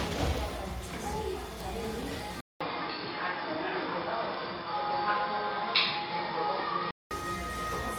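From start to finish the sound carries a grainy, breathy edge on its brighter parts: the upper spectrum is sparsely coded and partly filled with noise rather than true detail. This is plainly audible and is most likely Bluetooth LC3 compression, at a bitrate of around 48 kbps with 10 ms frames. Unlike a band limit, the full bandwidth survives, with content reaching about 20.1 kHz. The damage is texture, not missing top end.

At 2.41 s the audio drops out for about 200 ms. It then returns dull and boxy, with nothing above about 5.3 kHz, a noticeable jump in level and a faint new background noise well below the sound. It stays that way until 7.11 s, when the fuller sound comes back. That points to the input having switched to a poorer device. What sets it apart from codec damage is the sudden silence-marked change in tone, level and noise, confined to that stretch.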